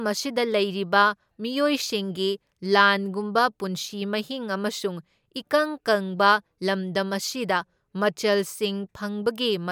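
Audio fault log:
No faults found in this speech clip.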